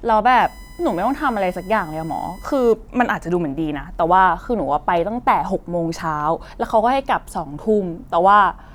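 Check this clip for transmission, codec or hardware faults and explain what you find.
There is one hardware fault in this speech clip: USB whine from about 0.40 s to 2.73 s. Current drawn in 1 ms USB frames leaks into the audio path, producing a steady tone at 1 kHz, loudest at its 2 kHz harmonic, roughly 30 dB below the speech. On a spectrogram it shows as thin, flat horizontal lines at those frequencies.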